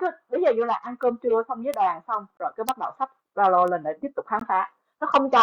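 At 1.03 s and 1.74 s, bit error spikes give single sharp broadband ticks: a flipped bit makes one or two sample values jump and return, with no gap in the speech. At 2.37 s, a gap between stream segments cuts a hard-edged silent hole of about 26 ms, distinct from a tick because the sound drops out rather than clicks. More bit error ticks follow at 2.69 s and 3.68 s. A second gap of about 17 ms at 4.40 s, 2 s after the first, fits a misaligned segment boundary.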